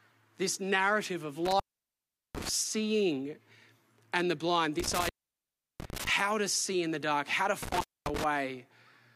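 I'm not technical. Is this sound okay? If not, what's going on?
No. The speech has an intermittent contact: a loose cable or plug briefly loses its connection. The sound cuts out with crackling at the edges of each gap, about 1.45 to 2.49 s, 4.80 to 6.09 s, and 7.63 to 8.24 s, with dropouts lasting roughly three quarters of a second, then a quarter.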